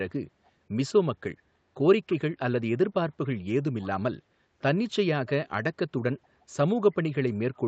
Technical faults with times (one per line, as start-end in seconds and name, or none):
2.09-2.17 echo leak
3.79-3.87 echo leak
5.27-5.32 echo leak